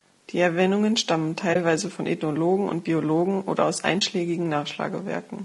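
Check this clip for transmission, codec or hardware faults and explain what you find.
Two faults are present: coding damage throughout, and two brief dropouts.

The whole clip of speech sounds rough and grainy, with plainly audible codec damage. The likely cause is low-delay AAC compression such as AAC-ELD. Its short frames resolve harmonics poorly, and at a rate around 32 kbps noise fills between them.

AAC frame loss with muting occurs at 1.53 to 1.56 s and again at 4.00 to 4.02 s, just after "oder aus". Each gap fits one lost frame of about 20 ms. The decoder zeroed that frame, and the overlapping windows fade the sound out and back in. The result is a brief dip.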